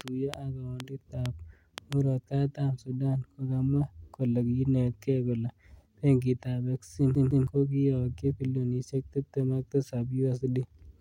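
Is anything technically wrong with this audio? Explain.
Yes, two things. From 0.01 to 1.94 s there's a train of clicks, roughly seven uneven pops about three per second and well above the speech, likely interference or a faulty connection.

Then at 7.15 to 7.47 s it's a CD stuck on one turn: a 0.16 s chunk replays twice with tiny mutes, stuttering right before "ko kiyokyi bilionisiek tibtem".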